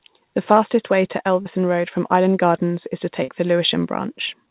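Short concealed packet loss occurs at 1.42 to 1.47 s, just after "fastest way to", and again at 3.23 to 3.30 s, after "is to". Each time, roughly 40 ms of the call arrived too late to decode, and the receiver covered the gap by extending the preceding sound before blending back into the real signal. Each repair is a brief smear where the audio briefly loses definition, heard against the narrowband call sound with nothing above 4 kHz, which fits a G.711 path.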